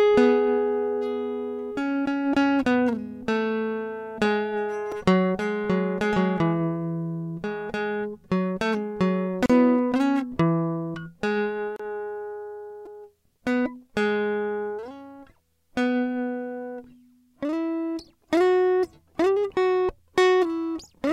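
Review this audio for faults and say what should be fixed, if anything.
Repeated buffer at 4.92 s and 12.86 s: new audio arrived late, so the device replayed its last 2.9 ms block, twice and then four times, which fits a 128-sample buffer. Each repeat is heard as a click or brief buzz, not silence. Feeding the output buffer on time, or enlarging it, prevents this.

Gap at a join of encoded pieces at 9.46 s (37 ms) and 11.76 s (32 ms): separately encoded pieces were joined with their encoder start delay and final-frame padding left in. The music drops to silence with smeared edges and then continues where it stopped, with nothing repeated as in a stutter. Trimming the delay and padding at each join prevents it.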